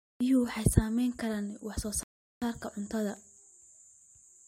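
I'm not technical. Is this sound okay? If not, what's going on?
No. A rebuffering stall at 2.03 s: the player ran out of audio, so after "saamayn karaan wax soo" the speech goes silent for about 0.39 s, then resumes with "saarka cuntada".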